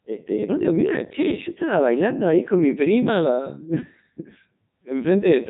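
From start to finish the speech has passed through a Codec 2 vocoder, which discards the waveform and keeps only pitch, voicing, energy and a coarse spectral envelope, then rebuilds the signal from a bank of sine waves. The damage is heavy, consistent with the 3.2 kbit/s mode, and nothing survives above 3.8 kHz. The result sounds robotic and buzzy, with a dull, band-limited top end and a synthetic texture.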